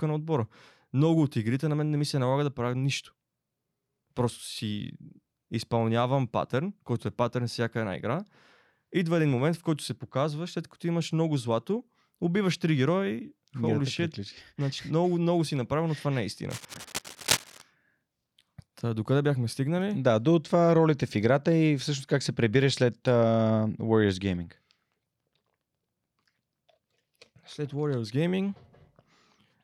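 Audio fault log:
16.49–17.62 s, cable scratch noise: for about 1.1 s a dense, irregular crackle and rustle sits over the speech, only a few decibels below it, so it is clearly audible rather than buried. The bursts are uneven and jagged rather than steady hiss, as when a conductor's contact resistance jumps about from moment to moment. The likely cause is a worn cable, connector or control being moved during recording, making intermittent contact until handling stops.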